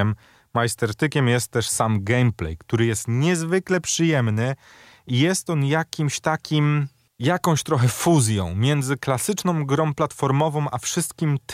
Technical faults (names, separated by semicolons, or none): none